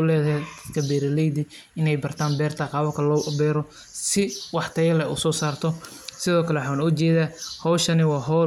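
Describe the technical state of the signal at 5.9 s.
At 5.9 s the audio is intact, with no audible dropout, distortion, glitch or other fault at that moment.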